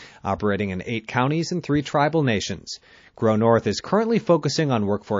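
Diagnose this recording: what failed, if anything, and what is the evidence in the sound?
Throughout the clip the speech has a plainly audible watery, swirly quality, with metallic chirps on sibilants, a dull top end that stops abruptly, and smeared consonant onsets. This is codec-stage damage, likely MP3 compression at a low bitrate, which fits roughly 32 kbps. Short of bits, the encoder cuts the treble at a fixed frequency and zeroes weak spectral lines, which flicker on and off from frame to frame and cause the swirl.

Pre-echo occurs at 1.83 to 1.86 s, just after "eight counties and three". A burst of hiss about 14 dB above the surrounding level precedes a sharp attack by about 29 ms, and the attack itself sounds softened. The codec spread its quantisation noise across a transform window of about 72 ms, so noise sized for the loud onset also filled the quiet moment before it. This fits an encoder that stayed in long blocks instead of switching to short ones at the transient.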